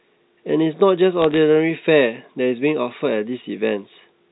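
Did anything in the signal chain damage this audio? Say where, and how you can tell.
Yes. Bit errors on the digital phone line, between 1.22 and 1.37 s, cause brief crackle over unchanged speech. Each flipped bit alters one G.711 sample, and sign or high-bit hits produce sharp ticks. The density suggests roughly 0.15 percent of bits corrupted in transmission.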